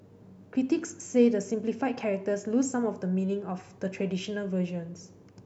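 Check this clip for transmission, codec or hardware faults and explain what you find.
No faults turn up anywhere in this speech recording. There is no event in it that needs a time, a cause or a description.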